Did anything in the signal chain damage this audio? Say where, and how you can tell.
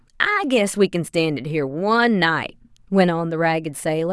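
No, nothing in the signal chain audibly damaged this speech recording. No stage, from the wiring through to playback, leaves any trace that can be heard.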